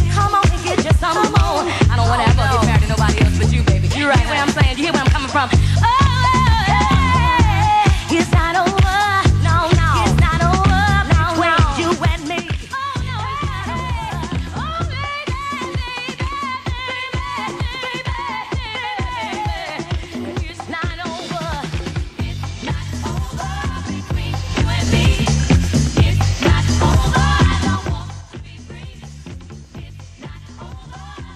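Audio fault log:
27.59–28.33 s, zipper noise: the level drops about 20 dB in unsmoothed 3 dB steps, around ten a second, and each jump ticks audibly.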